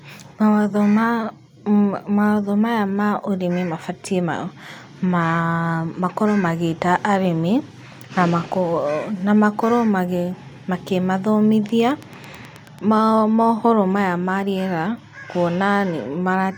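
Interference from nearby equipment or a faulty connection likely injects a train of clicks into this speech from 11.69 to 12.80 s: about ten evenly spaced pops, roughly nine per second, peaking louder than the speech itself, just before "mohoro maya ma rĩera".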